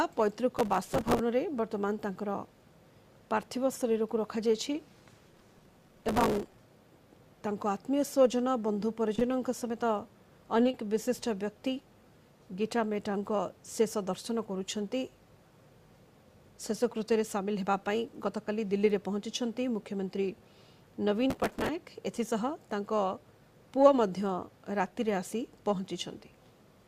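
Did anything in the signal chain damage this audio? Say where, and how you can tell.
Yes. Gritty bursts of crackle tear across the sound from 0.59 to 1.19 s, 5.28 to 6.59 s and 21.30 to 21.69 s, then stop cleanly. This is processor overload crackle at the driver or buffer stage: a buffer of a few milliseconds repeatedly missed its deadline, and stale audio was replayed with hard edges each time.

Brief smears appear at 9.15 to 9.19 s, 10.63 to 10.67 s and 10.71 to 10.75 s, where the sound wobbles rather than cutting out. This is short concealed packet loss on the network path. Each time, about 20 ms of audio never arrived, and the decoder filled the hole by extending the preceding sound before blending back.

Immediately after the first smear, from 9.19 to 9.23 s, the sound is held a moment too long with a slight buzz or dip, and nothing is lost. This is a short stall from a late packet. 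The jitter buffer ran dry, so the receiver stretched the last sound for about 17 ms until the packet arrived.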